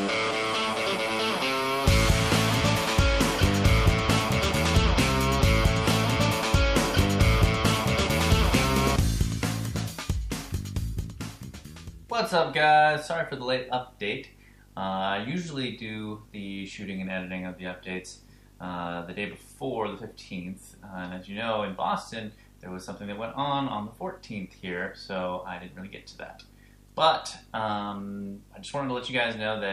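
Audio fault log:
Throughout: video or display buzz. There's a steady 50 Hz buzz with a gritty hash riding on top, plus a very high whine up at 15.6 kHz. That's a screen or video cable bleeding into the audio path. The 50 Hz part tracks the picture's field rate, and the whine is the line scan rate leaking through. It sits roughly 25 dB under the sound, so it's low.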